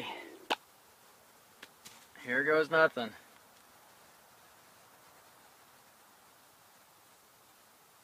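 No technical faults can be heard anywhere in this audio.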